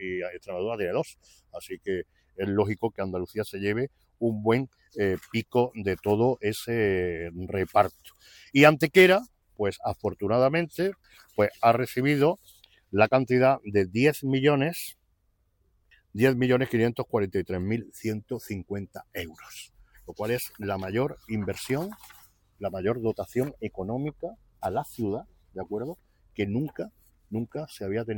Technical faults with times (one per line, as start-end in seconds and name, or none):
none